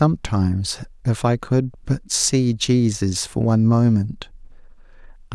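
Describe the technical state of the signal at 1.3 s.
At 1.3 s the speech signal is intact, with no audible fault at that moment.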